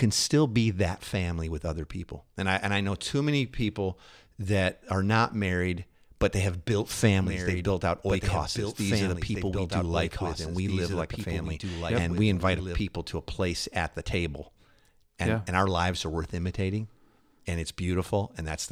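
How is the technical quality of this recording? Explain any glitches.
The recording has one clear technical fault, a doubled audio track. From 7.16 s, just after "but they have built", to 12.8 s, just before "to a place at", a second full-band copy of the speech runs about two seconds behind the original and roughly 5 dB quieter. It is likely a second, slower capture path mixed back in. It sounds like an overlapping, dry echo that starts and stops abruptly. On a spectrogram, the same formant patterns repeat about two seconds later, slightly fainter, with sharp edges.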